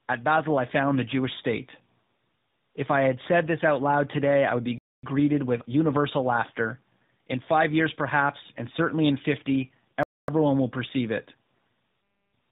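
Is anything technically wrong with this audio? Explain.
Yes. Throughout the clip the speech sounds rough, muffled and warbly, with nothing above about 3.8 kHz. This is tandem speech coding: the call passed through GSM full rate, then G.711 A-law, then AMR-NB at 12.2 kbit/s, so the speech was decoded and re-encoded at each border. Two lossy speech coders in a row, the second working on the first's damage, so the roughness adds up beyond what either alone would leave.

Twice the sound drops into a silent hole of 250 ms, from 4.78 to 5.03 s, between "today I would be" and "with universal laughter", and from 10.03 to 10.28 s, just before "will perceive it". This is a gap between chunks: the audio was handled in 5-second pieces, and silence was inserted at the joins. Nothing is missing, but the flow breaks at a regular interval.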